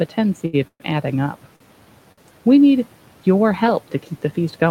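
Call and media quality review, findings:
Short stall from a late packet, three events. 0.45–0.55 s, just before "of adding": the last sound is held for about 79 ms. At 1.56–1.62 s it is held for about 43 ms, and at 2.12–2.20 s for about 53 ms. In each case the jitter buffer ran empty and the receiver stretched the last frame, then resumed in place. No audio is lost, but the timing slips. On the spectrogram, the harmonics run flat and smeared across each span. On the waveform, near-identical cycles repeat with a slight dip in level.

Call audio freeze at 0.67–0.82 s. The sound continues as a buzz that fades out, and about 60 ms of it drops to silence. The likely cause is packets held up in transit, which emptied the jitter buffer and made the concealment fill about 126 ms before playback resumed. No content is lost. On the spectrogram, a decaying smear runs into a blank band. On the waveform, the envelope tapers and then goes flat. 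The room noise, about 23 dB below the speech, is part of the recording.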